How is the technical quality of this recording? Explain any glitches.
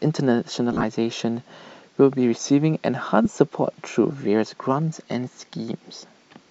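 The recording has two short glitches, both from lost LE Audio frames. From 0.72 to 0.83 s, about 80 ms of frames drop out in scattered bursts, the longest around 30 ms. The LC3 decoder patches each gap by replaying the last spectrum with scrambled phase, so the speech briefly turns into a hissy smear. A second, 15 ms loss at 3.24 s gives a quick rough blip.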